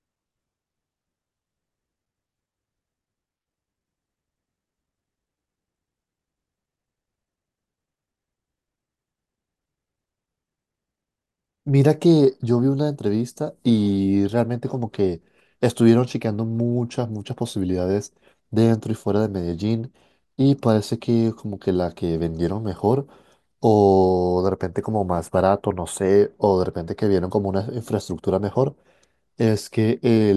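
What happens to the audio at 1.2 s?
Nothing goes wrong at 1.2 s; the speech runs through that moment intact, with no dropout, click or distortion.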